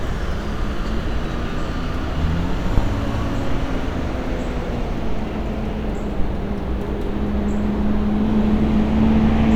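At 2.78 s a phantom power thump lands and is gone by 2.85 s. A supply was switched on a live input, and the sudden voltage step leaked through the coupling capacitors as a single deep, low-frequency push peaking at about -4 dBFS, dying away within roughly 17 ms. Unlike a handling bump or mechanical knock, it has no rustle, friction or rattle around it, just one clean electrical thud, much like a one-sided step.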